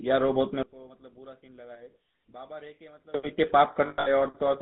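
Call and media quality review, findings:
GSM full-rate codec, whole clip. Buzzy, gravelly roughness on the voice, plainly audible. No content above 4 kHz. Excitation rebuilt from sparse regular pulses over a vocal-tract model, which fits GSM full rate at 13 kbps.

Level collapse, 0.63 to 3.14 s. The voice drops about 24 dB and turns faint. Likely one channel inverted. With one stereo channel's polarity reversed, the centred voice cancels in the mono sum. Only the small inter-channel difference survives.

Lost GSM frames, 3.86 to 4.08 s. Metallic, rough ringing holds the sound in place. About 180 ms is missing, scattered over 200 ms. The longest gap is around a tenth of a second. The decoder repeats the last good frame's parameters, which fits roughly nine 20 ms frames.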